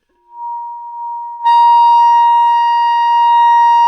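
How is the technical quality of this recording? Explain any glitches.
The recording has two short stalls from a late packet. The first runs from 0.88 to 0.95 s. The second runs from 1.34 to 1.42 s. Each time, a packet arrived late and the jitter buffer ran dry. The receiver held the last sound rather than going silent. It filled about 38 ms the first time and 55 ms the second. Then playback resumed where it had stopped, so nothing is lost. You hear a brief smear, with a faint buzz or dip.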